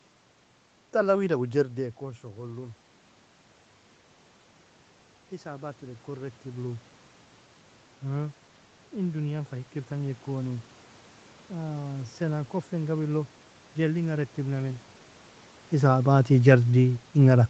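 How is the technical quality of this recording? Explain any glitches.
Two slow level swells are the main glitch in this speech recording, both heard after the talker's level drops. The first drop comes around 1.5 s, when the talker seems to lean back, and the top end stops near 8 kHz from the call path.

Automatic gain rising, 1.55 to 2.85 s and 5.42 to 6.93 s: input fell about 12 dB, so gain crept up about 3 dB, then about 4 dB, swelling voice and room noise together.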